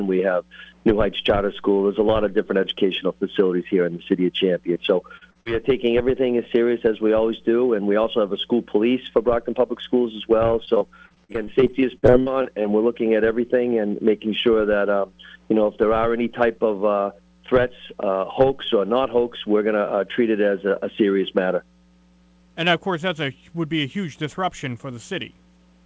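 Short concealed packet loss comes first, at 4.74 to 4.77 s, then 5.17 to 5.23 s, 5.31 to 5.37 s and 5.41 to 5.47 s. Each hole is 20 to 40 ms. The receiver extends the last sound to cover it. Each one is heard as a brief smear or wobble.

Repeated packet loss follows from 10.65 to 12.66 s. There are 18 gaps, the longest 63 ms. Concealment fills about a fifth of the stretch. Patch follows patch too quickly to hide. The sound turns choppy, with pieces missing.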